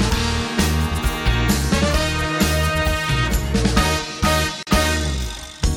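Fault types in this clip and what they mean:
Gap at a join of encoded pieces: the audio was encoded in separate chunks, about 6 s apart, and spliced without trimming the encoder's padding. At 4.63 s a roughly 40 ms hole opens with smeared edges, then the sound resumes where it stopped.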